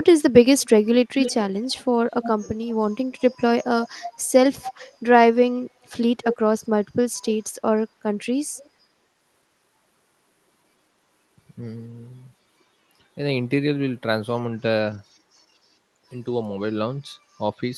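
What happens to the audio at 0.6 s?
From 0.6 to 0.69 s a very faint, delayed copy of the speech trails in, about 230 ms behind the original. This is likely an echo leak: a far-end loudspeaker's sound reached its microphone and slipped past the echo canceller back into the call.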